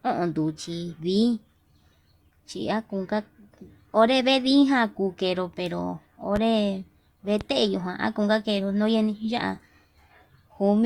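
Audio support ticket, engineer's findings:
Loud pop, twice: 6.36–6.39 s and 7.41–7.44 s. Single sharp thump each time, peaking about 10 dB over the speech. Likely a voltage transient from a connector, switch or static discharge, shaped by downstream circuitry into a short pulse. Speech runs on unbroken underneath, so not a dropout or buffer glitch, which would gap the signal. The roughly 30 ms body sets it apart from a brief digital tick.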